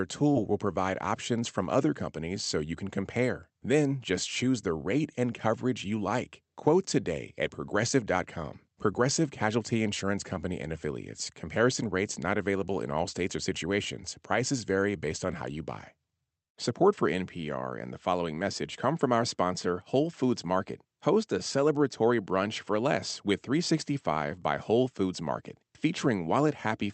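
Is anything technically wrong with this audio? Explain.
Yes. From 0.33 to 0.37 s, just before "will provide options from", there is short concealed packet loss: about 20 ms never arrived, and the receiver extended the preceding sound before blending back, leaving a brief smear.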